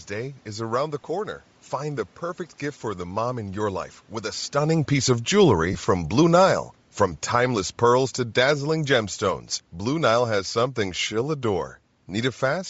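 From start to finish the speech carries a grainy, breathy edge on its upper frequencies, likely from Bluetooth LC3 compression at a low bitrate. The codec works in 10 ms frames, and at a rate that fits roughly 32 kbps it discards much of the high spectrum and fills the gaps with noise. The damage is plainly audible. On a spectrogram the top band looks speckled and uniform rather than following the harmonics of the voice.

At 1.03 s a brief lost LE Audio frame interrupts the sound. The decoder repeats the last spectrum with randomised phase, so roughly 10 ms turns into a short noisy smear. On a spectrogram it shows as a thin vertical patch of blurred energy with the harmonic lines broken.

From 4.54 to 6.53 s the automatic gain falls by about 4 dB. The control lowered its gain gradually, so the voice and the room noise beneath it sink together. On a waveform the envelope tapers steadily. 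Around 4.5 s the talker also moves relative to the microphone, which changes the level in the same stretch.

Inside that stretch, from 5.73 to 5.76 s, lost LE Audio frames leave about 20 ms of concealment, which fits two consecutive frames. This gives a longer grainy smear, a wider blurred column on the spectrogram.

From 7.19 to 12.65 s the automatic gain falls again, this time by about 6 dB. The speech and its background sink slowly together, and the waveform's peaks shrink across those five seconds.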